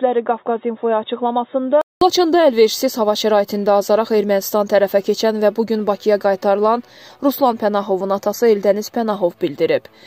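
From 0 to 2.01 s the audio is dull and boxy, with nothing above 3.8 kHz, somewhat quieter and carrying a faint different background noise. After a 200 ms silence at 2.01 s it opens up, the likely result of the input switching from a poorer device.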